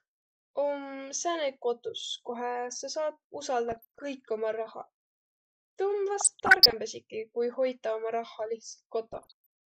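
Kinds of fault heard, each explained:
DAB burbling: Weak reception let bit errors of around 0.5 to one percent get past error correction into the MP2 data. Corrupted samples then put short noise blips in single sub-bands and corrupted scale factors make sub-bands jump in level, giving burbling over the speech at 3.69–3.99 s, 6.20–6.73 s and 9.12–9.46 s.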